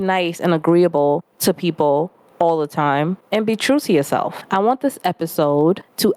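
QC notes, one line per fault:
Throughout: gain pumping. Gain ducks by about 20 dB under each loud syllable, likely a fast limiter fighting excessive input gain.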